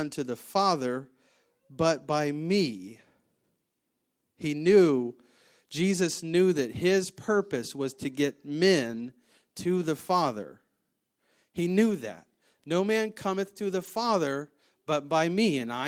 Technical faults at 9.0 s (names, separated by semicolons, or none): lost packet rebuilt from error correction